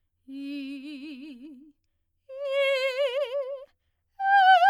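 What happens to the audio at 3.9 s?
Nothing goes wrong at 3.9 s; the music plays through that moment intact, with no dropout, click or other fault.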